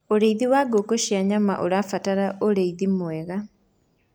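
No technical faults can be heard anywhere in the recording.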